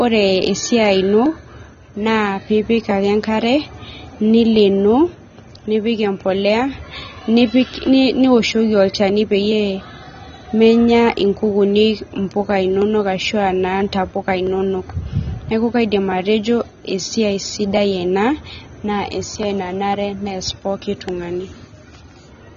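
AAC compression throughout the speech: nothing above 6.9 kHz, with dull, smeared, fizzy sibilants, likely from AAC-LC at a low bitrate around 24 kbps.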